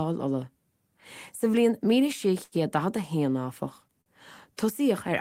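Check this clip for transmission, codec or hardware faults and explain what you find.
Two short stalls from a late packet are audible in this speech. Both times a packet arrived late and the jitter buffer ran dry, so the receiver held the last sound for about 84 ms at 2.43–2.55 s, just before "a da", and about 47 ms at 4.01–4.09 s, just after "héan áfach." Nothing is lost, but each sound drags unnaturally with a faint buzz or dip, and playback sits slightly later afterwards.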